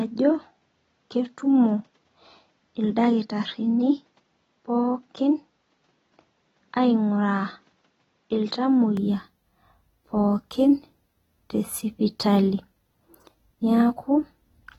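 From the start to 8.97 s, the speech comes through a narrower band with nothing above 7.5 kHz. It sits about 5 dB lower, over its own low noise floor. The likely cause is an input switched to a poorer device. At 8.97 s it clears up with no gap.

Throughout the clip there is plainly audible coding damage. Nothing sounds above 19.3 kHz. This points to AAC compression, likely AAC-LC at around 24 kbps. At that rate the hearing model drops detail it judges masked, and the loss can be heard.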